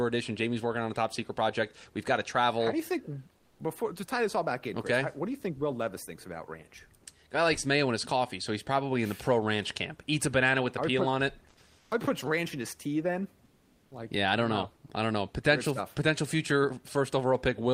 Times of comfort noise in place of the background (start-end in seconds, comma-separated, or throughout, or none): 3.37-3.59, 11.79-11.91, 13.45-13.91